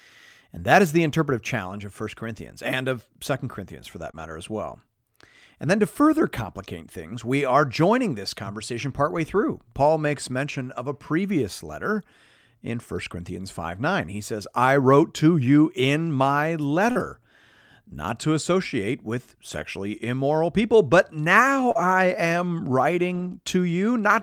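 Just after "that is the interpretive", at 1.67 to 1.69 s, comes the first lost packet rebuilt from error correction. A 20 ms packet never arrived, and the decoder played the low-bitrate copy carried in the next packet. There is no gap, only a brief roughened, noisier patch. On a spectrogram it shows as a short stretch of grainier, less defined texture with no break in the waveform. A second single-packet repair follows at 4.07 s.

From 4.11 to 4.15 s comes the first short concealed packet loss. About 20 ms arrived too late, and the receiver extended the preceding sound to fill the hole before blending back. It is heard as a momentary smear or wobble. A longer 60 ms rebuilt stretch follows immediately at 4.15 to 4.25 s, prolonging the rough patch.

At 14.81 to 14.83 s, between "says I" and "to you in my", another 20 ms packet is rebuilt from error correction, again a short grainy blip rather than a dropout.

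From 16.91 to 16.97 s there is a 40 ms concealed loss. Overlapping its end, at 16.95 to 17.01 s just after "to you in my", 40 ms is rebuilt from error correction. Together they make one smeared, then rough, moment.

At 19.49 to 19.63 s, 80 ms is rebuilt, a coarser, noisier span with a mottled spectrogram texture.

From 21.71 to 21.77 s, 36 ms is concealed by extrapolation, with its final 20 ms (21.75 to 21.77 s) rebuilt from error correction.

At 23.15 to 23.33 s comes the longest repair, 100 ms of rebuilt audio heard as an extended rough, hissy stretch with a continuous waveform.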